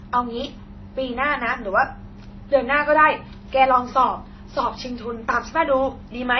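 Throughout the speech, the audio was likely transcoded between lossy codecs, with the sound pointing to an MP3, then HE-AAC, then AAC-LC chain at low bitrates. Each re-encode piles its own smearing and warble onto earlier artefacts, and nothing remains above 6 kHz.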